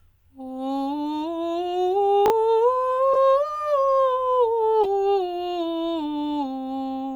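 At 2.26 to 2.30 s the music jumbles briefly: chunks out of order. A 20 ms piece plays one chunk late, after material that should follow it, leaving hard joins. Unlike a dropout, nothing goes missing; the sound is only scrambled.

At 3.13 to 3.16 s and again at 4.83 to 4.86 s a short, squeaky blip cuts across the music: a corrupt frame decoded. Damaged data put energy at wrong frequencies, hitting several frames the first time and a couple the second. It adds foreign tone rather than rearranging the music.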